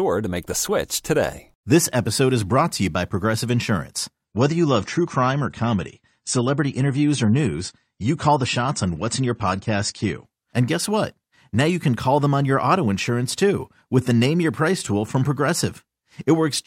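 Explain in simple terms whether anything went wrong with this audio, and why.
From 4.25 s to 10.25 s the speech turns dull and smeary, with nothing above 9 kHz: an adaptive stream at a lower bitrate, switched down mid-playback.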